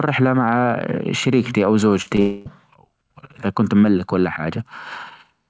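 A speech recording carried over a call link that passes nothing above 8 kHz, consistent with a G.722 stream, and it breaks up right after "مع شريكتي أو". At 2.02 to 2.08 s and again at 2.16 to 2.20 s there are brief smeared wobbles where the sound seems to stretch rather than move on. This is short concealed packet loss: about 40 ms and then 20 ms of audio arrived too late. The receiver filled each gap by extending the preceding sound before rejoining the real signal. Immediately after, from 2.20 to 2.48 s, the sound turns into a sustained, fading continuation for roughly a quarter of a second instead of going silent. The speech then resumes with that stretch simply absent. The likely cause is a long network dropout, in which about 260 ms never arrived and the receiver kept synthesising sound from the last received audio across the entire hole.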